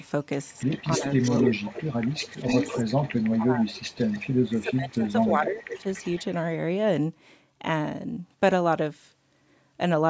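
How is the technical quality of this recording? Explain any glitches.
The recording has two recurring call-path faults, echo leak and speech dropping out under double talk. The audio also stops at about 8 kHz, which fits the normal band limit of call microphone processing.

Echo leak appears at 0.00–0.07 s, 0.51–3.31 s, 3.72–4.54 s and 5.21–6.25 s. A delayed duplicate of the speech trails the direct sound by about 273 to 285 ms. This is likely a far-end loudspeaker being picked up by its microphone, with the echo canceller failing to remove it. The copy is strongest in the long 0.51–3.31 s stretch, roughly 10 dB under the speech. Elsewhere it sits roughly 20 to 25 dB down.

Speech suppressed in double talk occurs at 0.98–2.47 s, 2.89–3.85 s and 4.50–5.86 s. The talker's level dips in pieces, by as much as about 25 dB in the first span and about 20 dB in the others. The affected portions add up to roughly 0.7 s in each of the first two spans and about 1 s in the third. 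These dips overlap the echo activity, so the likely cause is the echo canceller mistaking near-end speech for echo while both ends were active and attenuating everything.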